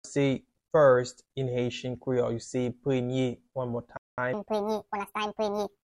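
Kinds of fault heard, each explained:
Rebuffering stall: At 3.97 s the audio drops abruptly into silence and stays there until 4.18 s, then carries on from exactly the point where it broke off, so nothing is skipped but roughly 0.21 s of dead air is inserted. This is what happens when a player exhausts the audio it has already downloaded and must wait for the next chunk to arrive before it can continue.
Section at the wrong speed: From 4.33 s to the end, the sound suddenly turns hurried and shrill, running 1.66 times faster than before with the pitch lifted by about ten semitones, since speed and pitch rise together. That pairing points to the final stretch being played back at the wrong rate, most likely because a player or editor timed it against a clock mismatched to the one it was recorded with.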